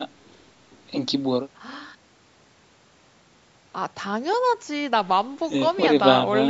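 No technical faults can be heard in the speech, which carries the normal signature of call microphone processing, with the lowest bass taken out by its high-pass filter and nothing above 8 kHz.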